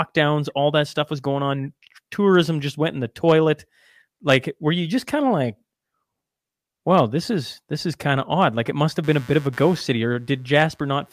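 From 9.04 s to the end of the speech, computer activity noise appears: load changes in the machine shift the audio circuit's shared ground, giving a buzzy chirp pulsing at around 150 Hz, roughly 30 dB below the speech. A spectrogram shows evenly spaced vertical ticks; the waveform, small regular spikes.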